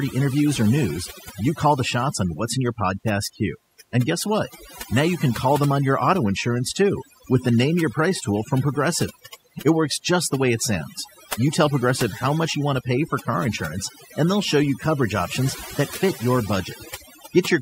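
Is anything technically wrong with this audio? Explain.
Yes. Overdone noise removal runs throughout: an aggressive reducer shuts off frequency bands near its noise estimate, leaving near-silent gaps with twinkling specks.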